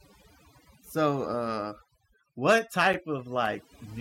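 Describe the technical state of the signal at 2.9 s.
A gap between stream segments falls at 2.93 s, right after "so uh what." The timestamps of two adjacent segments don't meet, so the player fills the space with silence. The result is a hard-edged dropout of a few milliseconds. No audio is lost, only pushed later.

Overdone noise removal is also present here, as it is across the whole clip. Bands near the estimated noise floor are pulled down so hard that quieter parts of the speech vanish with them. The background drops and breaks up into twinkling specks.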